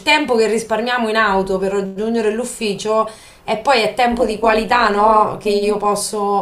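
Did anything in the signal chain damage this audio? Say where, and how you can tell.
Yes. From about 4.12 s to 5.86 s the speech takes on a metallic buzz with extra tones around the voice, the level pumping up and down by about 11 dB at around 200 times a second. This is overlap-add ripple from a frame-based processing stage such as call processing or a time-stretch or noise-reduction block. The audio was split into windowed frames and rejoined with an overlap whose windows don't sum to constant gain, so the level dips once per frame.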